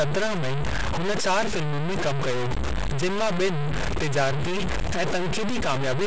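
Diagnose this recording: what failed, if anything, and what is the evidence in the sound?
Throughout the speech, a coarse grit rides on every syllable, about as loud as the speech itself. The likely cause is low bit depth without dither at sample-format conversion: undithered truncation, fitting roughly 3 bits, makes the error track the signal.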